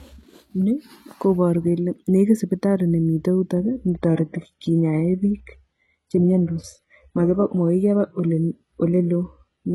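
At 3.56 s the speech switches abruptly to an adaptive stream at a lower bitrate, with no gap, and stays there to the end. The connection likely slowed. Nothing remains above 11.5 kHz. The treble turns thin, which fits a very low-bitrate HE-AAC encoding.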